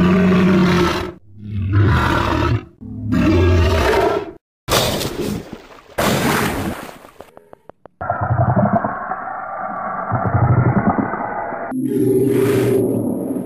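Something, likely electrical interference from nearby equipment or a faulty connection, injects a repeating pulse from 6.28 to 8.97 s. The result is a train of clicks, around twenty regularly spaced ticks at 6.3 per second, each roughly as loud as the sound itself.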